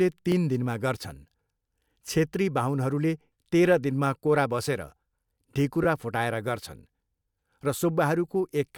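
Repeated buffer at 0.32 s and 5.84 to 5.86 s: audio arrived late, so an 11 ms chunk (likely a 512-sample buffer) replayed once, then twice, making quick clicky buzzes.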